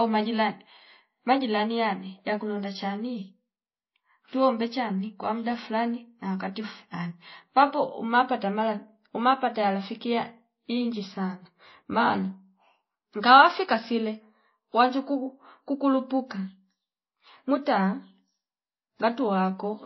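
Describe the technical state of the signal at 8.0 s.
Transcoding between lossy codecs is the likely cause of what is heard at 8.0 s, and it runs through the whole clip. Nothing remains above about 5.8 kHz, so the speech sounds dull and band-limited. Smeared, watery artefacts from a heavily compressed first pass, consistent with a low-bitrate MP3, are overlaid by a second codec's own coloration, resembling WMA. That later encoder spends its bits re-encoding the earlier damage, so both sets of artefacts are audible together.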